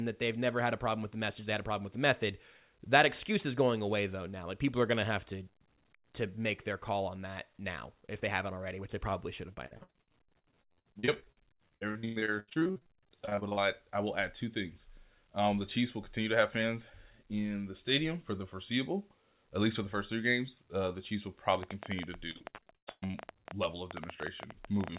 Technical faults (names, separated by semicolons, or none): repeated packet loss (robotic sound); train of clicks